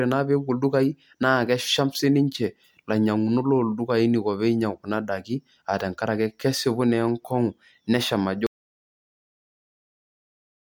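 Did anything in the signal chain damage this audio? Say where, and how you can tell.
Yes. The speech stops abruptly at 8.47 s and never comes back. From there to the end of the clip the signal is silence, with no room tone or noise floor underneath. That points to an audio dropout to silence at the capture stage rather than a pause by the talker. The likely cause is the input being lost, through a disconnected device, a failed link or a mute, while the recorder kept writing silence.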